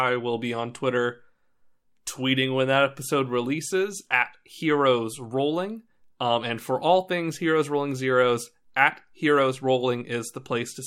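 No technical faults are audible.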